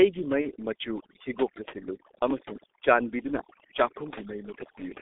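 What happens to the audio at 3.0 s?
At 3.0 s you're hearing the overdone noise removal that runs through the whole clip. The denoiser is pushing individual frequency bands right down whenever they sit near its noise estimate, so quiet parts of the speech vanish with them. The gaps drop and break up into little twinkling specks.

The G.723.1 codec is also active there and for the whole clip. The line only passes about 250 Hz to 3.6 kHz, and the heavy coding damage fits a stream of around 6.3 kbit/s, so the speech comes across muffled and hoarse, with smeared consonants.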